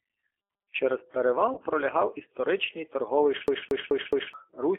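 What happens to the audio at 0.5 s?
At 0.5 s you're hearing G.729 codec damage, present across the whole clip. The speech is rebuilt from a vocal tract filter plus a few pulses per frame, which fits an 8 kbit/s codec, so it sounds rough and synthetic, squeezed into roughly 300 Hz to 3.4 kHz.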